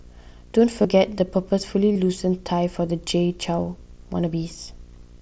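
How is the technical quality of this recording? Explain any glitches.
The recording has a steady low buzz under the speech for its whole length and two brief glitches where the audio is patched over. The speech comes through a wideband Bluetooth headset link (mSBC), which carries it up to about 8 kHz with a faint graininess on louder sounds.

Video or display buzz runs from start to finish. A screen or its video cable is leaking into the audio path, so the picture's field rate, 59.94 Hz, appears as a low buzz with harmonics and a fizzy hash on top. It sits about 30 dB below the speech.

Concealed Bluetooth headset packet loss occurs twice, at 0.82 to 0.85 s and at 1.94 to 1.96 s. Packets between headset and phone were dropped, covering about 22.5 ms and 30 ms. The receiver filled each gap by repeating the closest-matching stretch of the audio just before it. This suggests runs of three or four lost packets. 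Each sounds like a brief buzzy, held tone at full level, with a small warble as the real signal resumes.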